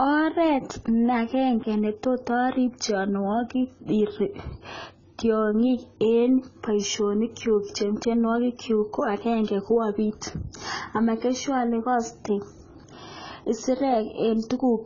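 From start to finish the speech is band-limited, with nothing above about 7.1 kHz, and it carries heavy codec damage: sibilants turn fizzy, sustained vowels warble, and transients sound smeared. This pattern is likely AAC compression, specifically AAC-LC at a very low rate, which fits a bitrate around 16 kbps. With so few bits, the encoder drops the top of the spectrum and quantises the remaining frequency lines coarsely, leaving gaps and substitute noise where detail should be.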